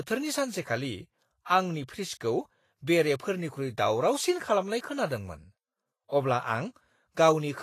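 From start to finish the speech carries Vorbis compression damage that is plainly audible. Nothing sounds above about 14.2 kHz, and the treble beneath that edge is hissy and grainy, with fine detail replaced by noise of similar energy. Tonal parts sound roughened and onsets are smeared. The cause is likely heavy lossy coding, with coarse quantisation of the residue above a smooth spectral floor, consistent with a bitrate near 32 kbps.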